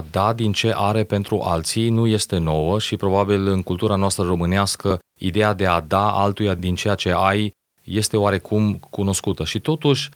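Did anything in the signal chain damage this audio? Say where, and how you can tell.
No, nothing along the chain from capture to playback has left audible damage on this speech recording.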